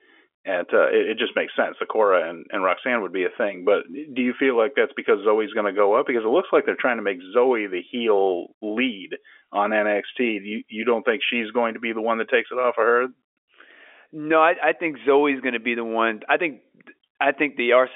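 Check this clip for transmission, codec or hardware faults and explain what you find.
No transmission, codec or hardware faults are present: the speech runs over a standard G.711 mu-law telephone channel at 64 kbps, with the expected line band of roughly 300 Hz to 3.4 kHz, nothing above about 3.7 kHz, and at most a faint trace of the codec's level-following quantisation noise.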